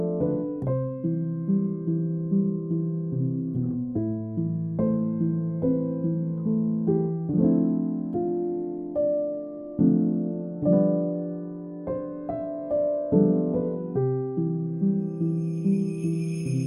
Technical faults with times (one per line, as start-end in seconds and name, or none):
none